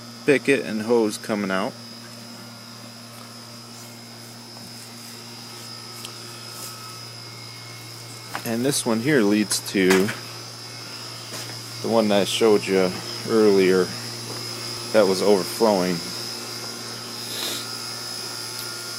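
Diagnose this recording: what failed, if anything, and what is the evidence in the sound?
Two abrupt jumps in the sound, at 8.34 s and 14.77 s. There is no gap of silence. About 10 ms is skipped at the first, roughly 30 ms at the second. The likely cause is a dropped buffer (overrun) at the driver or buffer stage. Samples were overwritten before capture, so the two sides are spliced together.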